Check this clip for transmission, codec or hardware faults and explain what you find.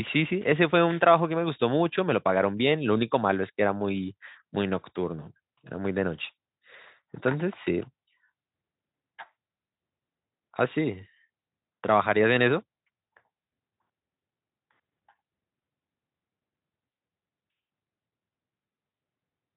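Listening to the speech from beginning to end, nothing stood out as a transmission, codec or hardware problem.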